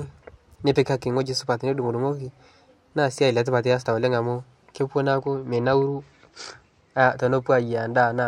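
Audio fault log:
5.12–7.08 s, Bluetooth SBC bit pool drop: the speech turns dull and gritty, treble fading under rough noise, then clears. Congestion likely forced the encoder to cut its bit pool, consistent with a fall from 31 to 11, roughly 83 kbps, starving upper sub-bands and coarsening the rest.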